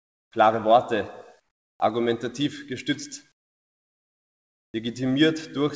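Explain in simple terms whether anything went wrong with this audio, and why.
In the pauses at 0.0 to 0.32 s, 1.40 to 1.80 s and 3.32 to 4.74 s, the background drops to a quieter, smoother hiss, most likely comfort noise in place of the background. The sound keeps a steady hiss, so it is not a dropout to dead silence.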